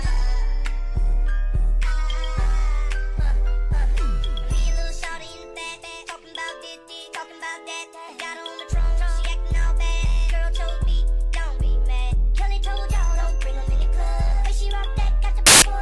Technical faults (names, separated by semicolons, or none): file tags played as audio